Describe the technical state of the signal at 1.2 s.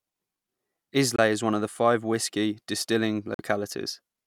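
A Bluetooth dropout, most likely from an audio packet reaching the headphones too late and being discarded, cuts the speech from 1.16 to 1.19 s. The gap of about 23 ms, which fits a single lost packet, falls silent, then the speech resumes at "is one of five" as though it had kept playing.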